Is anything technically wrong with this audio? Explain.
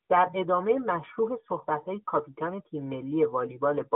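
Yes. The speech runs through the AMR narrowband mobile codec for the whole clip. This 2G and 3G phone codec samples at 8 kHz and rebuilds the voice from a vocal-tract model fed with sparse pulses. The band is squeezed to about 200 Hz to 3.5 kHz, and nothing sits above 3.8 kHz. The voice sounds thin and phone-like. The codec damage is plainly audible: a buzzy, synthetic edge that fits a middling bitrate near 10 kbps.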